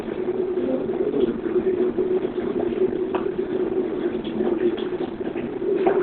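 Likely heavy Opus compression throughout, at a rate that points to about 12 kbps, has pushed the encoder into its SILK speech mode at narrowband width. The audio sounds muffled and hoarse, with nothing above 4.3 kHz.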